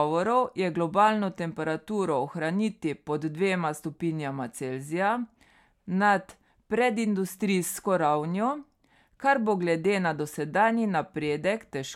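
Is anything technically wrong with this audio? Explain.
No, nothing is technically wrong with this audio.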